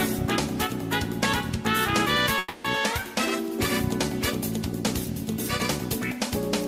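An audio clip with one call audio freeze from 2.38 to 2.65 s. For about 260 ms the last sound is held on as a fading buzz or hiss instead of new material. The audio then resumes exactly where it stopped, with nothing skipped, so everything after 2.65 s arrives 260 ms later than it should. The likely cause is delayed packets draining the jitter buffer, leaving the receiver to fill the wait by extending the previous sound.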